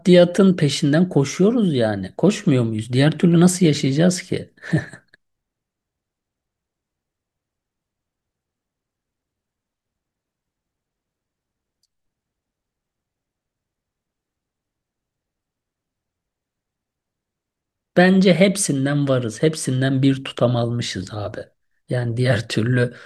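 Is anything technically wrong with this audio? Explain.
No, the speech signal holds steady throughout, with no technical faults to be heard.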